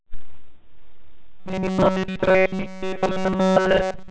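Speech carried over G.711 telephone coding, with nothing above 4 kHz, turns into robotic sound from repeated short buffers from 1.40 s to 4.11 s: a rigid, metallic 188 Hz buzz that persists throughout that stretch. The likely cause is repeated playback of roughly 5.3 ms segments while incoming audio is dropped.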